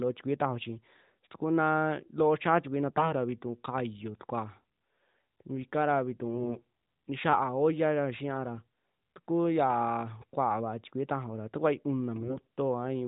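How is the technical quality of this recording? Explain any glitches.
The recording has three short AMR bit error bursts, at 2.90 to 3.10 s, 6.34 to 6.65 s and 12.16 to 12.47 s. The speech is narrowband AMR-NB mobile audio with nothing above 4 kHz, and its light coding fits the 12.2 kbps mode.

In each burst, weakly protected bits in the codec frames arrive corrupted, about 7% in the first and about 10% in the later two. The misplaced excitation pulses and skewed gain and spectral values turn the speech hoarse, scratchy and gargly.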